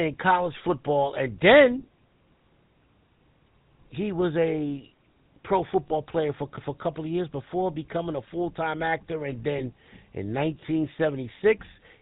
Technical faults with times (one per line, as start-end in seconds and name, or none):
0.00-12.02 GSM full-rate codec
5.88-5.92 lost GSM frames
9.58-9.62 lost GSM frames